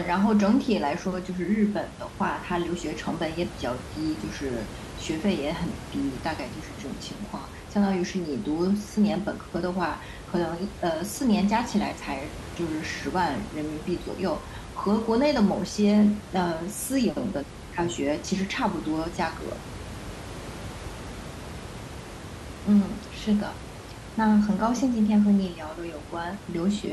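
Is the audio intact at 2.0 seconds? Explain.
Yes, the audio is intact at 2.0 seconds; the speech comes through cleanly there, with only the room's own background noise sitting about 14 dB below it.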